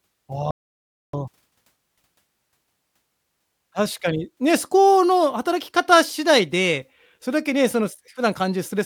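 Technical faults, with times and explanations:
0.51–1.13 s, audio dropout to silence: The speech stops abruptly and the signal falls to silence for about 0.63 s. No room tone or background hiss remains in the gap, so the input itself was lost rather than the speaker pausing. The likely cause is a brief break in the input, such as a disconnected device, failed link or stray mute, while recording continued writing silence. Whatever was said during the gap is gone.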